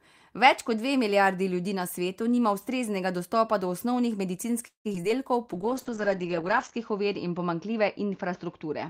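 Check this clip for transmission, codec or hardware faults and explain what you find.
Three faults are present, all in the second half of the speech.

From 4.67 to 5.04 s there is repeated packet loss with a robotic sound. Five gaps fall close together, and concealment stretches the preceding sound across about half of the span. The longest gap is 175 ms. The result is choppy, robotic speech with small pieces missing outright.

A call bitrate drop begins at 5.53 s and lasts to the end. Audio bandwidth narrows from 20 kHz to 8 kHz, which points to the encoder being pushed from roughly 32 kbps down to about 8 kbps. It stays at the lowest quality for about 1.2 s, and the speech sounds muffled and rough.

A jitter buffer slow-down runs from 5.57 to 6.24 s, overlapping the start of the bitrate drop. To rebuild its reserve, the receiver repeats short pitch periods and adds 69 ms. The speech plays at 91% speed with unchanged pitch, so syllables sound slightly drawn out.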